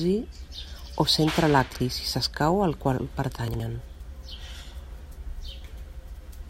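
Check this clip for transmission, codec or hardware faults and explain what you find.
Two spots in this speech clip have chunks out of order. From 1.68 to 1.8 s, just after "o centre" and before "si s'escau al qual", and again from 3.48 to 3.6 s, after "si s'escau al qual", a 60 ms chunk plays one chunk late, swapped with its neighbour. Each swap gives a brief jumbled stutter, with three hard joins.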